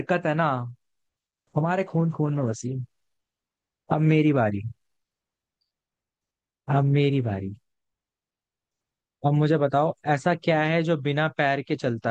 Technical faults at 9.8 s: none

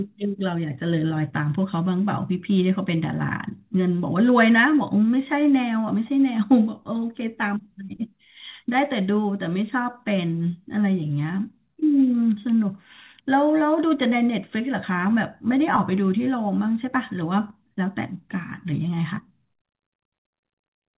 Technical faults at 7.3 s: none

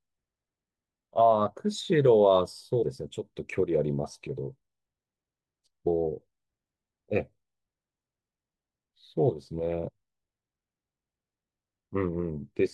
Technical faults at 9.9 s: compressed frames skipped

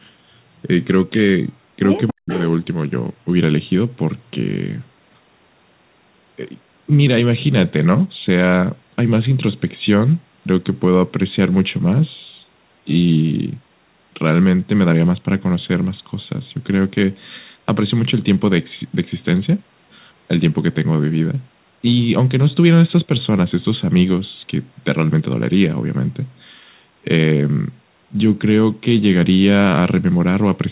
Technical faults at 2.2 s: echo leak; speech suppressed in double talk

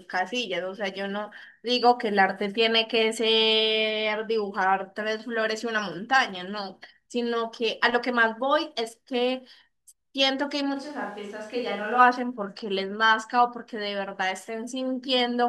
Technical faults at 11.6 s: switch to a distant microphone

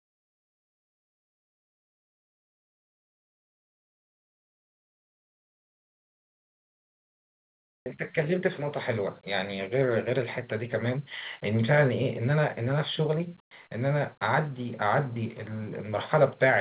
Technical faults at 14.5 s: none

